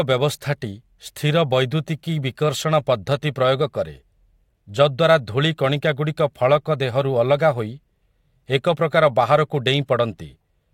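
No technical faults are audible.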